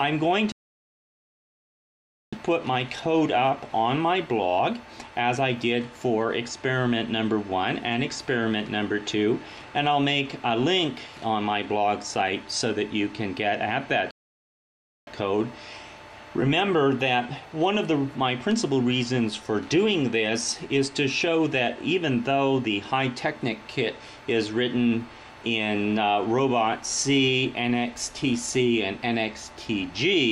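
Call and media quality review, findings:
Playback stall, 0.52–2.33 s (1.8 s) and 14.11–15.07 s (0.96 s): output drops out mid-flow; likely player buffer underrun or blocked thread. Waveform flatlines, spectrogram shows blank vertical gaps.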